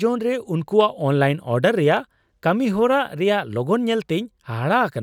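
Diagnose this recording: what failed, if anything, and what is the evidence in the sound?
Two single sharp clicks in the speech, at 0.81 s just before "ᱚᱱᱞᱟᱭᱤᱱ ᱚᱰᱟᱨ" and at 1.97 s just after it, point to dropped samples, likely at the driver or buffer stage. At each point only a handful of samples, well under a millisecond, go missing. The waveform steps abruptly from one value to a later one instead of continuing smoothly. No audible sound is removed. On a spectrogram each event is a thin vertical line spanning the full frequency range.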